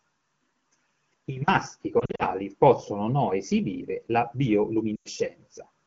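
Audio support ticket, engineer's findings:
Lost AMR speech frames, 1.99–2.23 s, after "I maschi", before "possono o no esibire". Brief warbles and dips; about 120 ms lost across 200 ms, longest run 40 ms. AMR-WB decoder concealing with last good pitch and tract settings at falling gain. 12.65 kbit/s wideband path intact.

Lost AMR speech frames, 4.96–5.08 s. 100 ms lost, five 20 ms frames. Sound smears then fades quickly, wideband concealment, returning rough. Cause: radio errors failing frame checksums.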